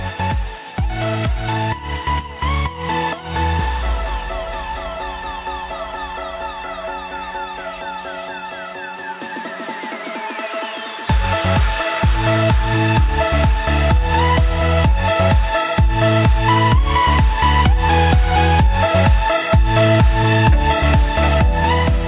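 Nothing stood out as a technical problem on listening.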